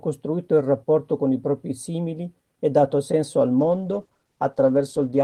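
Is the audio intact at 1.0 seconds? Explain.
Yes, the speech at 1.0 seconds plays through intact, with no dropout, click, distortion or other audible fault at that moment.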